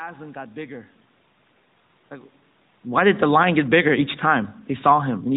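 Nothing technical goes wrong anywhere here, so there's no fault to point out, just room sound in the background and a level change around 2.0 s where the talker shifts position.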